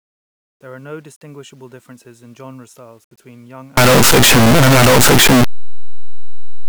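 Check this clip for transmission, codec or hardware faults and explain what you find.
There is one fault, and it affects the last part of the speech. From 3.77 s to 6.68 s, the audio becomes very loud and harsh. Soft sounds are as loud as strong ones. This points to a likely signed and unsigned mix-up in the 8-bit samples. Reading them the wrong way flips the top bit. Every zero crossing then jumps across the whole range.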